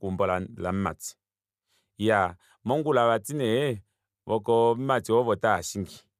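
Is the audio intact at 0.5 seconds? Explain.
Yes, at 0.5 seconds the speech is intact, with no audible fault at that moment.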